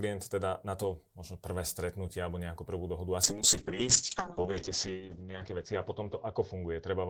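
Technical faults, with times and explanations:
3.24–7.09 s, call bitrate drop: the encoder falls from 32 to 7 kbps and bandwidth narrows from 20 kHz to 8 kHz, so the speech turns coarse, watery and muffled without gaps, unlike packet loss.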